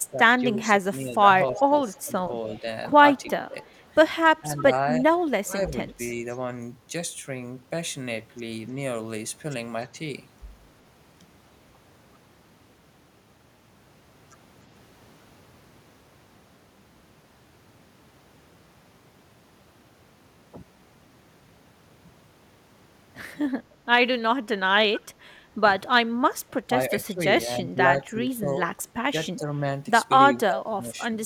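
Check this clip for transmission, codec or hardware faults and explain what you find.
Two kinds of fault are audible, both at the start and end of the clip.

Speech suppressed in double talk appears from 0 to 6.47 s and again from 25.27 to 31.13 s. The speech dips by up to about 15 dB, for roughly three seconds in each stretch. The likely cause is an echo canceller mistaking overlapping talk for echo and turning it down.

Echo leak appears from 1.55 to 4.62 s, 5.69 to 6.37 s and 24.94 to 25.0 s. A faint delayed copy of the speech trails by 342 ms in the first two, at about 15 and 20 dB below it, and by 302 ms in the last, at about 20 dB below. This is likely loudspeaker pickup that the far-end echo canceller failed to remove.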